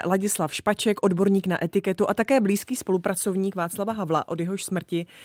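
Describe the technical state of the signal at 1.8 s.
At 1.8 s the speech signal is intact, with no audible fault at that point.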